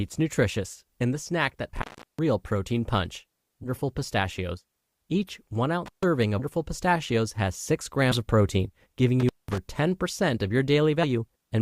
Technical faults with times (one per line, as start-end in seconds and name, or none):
1.76-2.19 intermittent contact
3.63-3.70 compressed frames skipped
5.86-6.03 intermittent contact
8.11-8.17 compressed frames skipped
9.20-9.58 intermittent contact